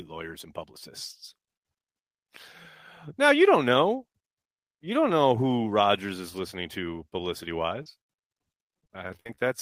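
Speech with repeated packet loss (robotic sound) from 7.82 to 9.44 s: many short dropouts, the longest about 53 ms, patched by stretching earlier sound, so it turns choppy.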